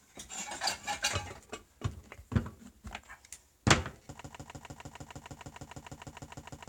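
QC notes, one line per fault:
4.21–6.69 s, broken-record loop: from 4.21 s a single 152 ms fragment of the sound repeats back to back, identical each time, 16 times through to the end of the clip. The result is a rapid, mechanical stutter at about six and a half repeats per second with no forward progress. The likely cause is a stalled player, encoder or stream that kept re-sending the last fragment it held, so the audio due in those final seconds is lost.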